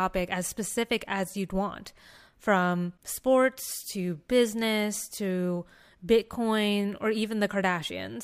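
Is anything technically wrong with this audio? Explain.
No, nothing technically wrong turns up anywhere in this speech clip.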